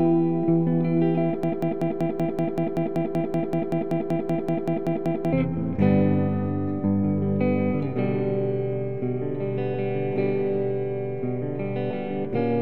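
A broken-record loop runs from 1.43 s to 5.33 s. A fragment of about 0.19 s repeats exactly, back to back, 20 times. The sound stutters in place for nearly four seconds instead of moving on. The cause is likely a stall in the player, encoder or stream, which kept sending the last piece it held. Whatever should have played during that span is missing. Normal playback resumes at 5.33 s.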